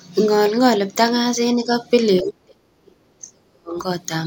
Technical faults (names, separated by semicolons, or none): speech suppressed in double talk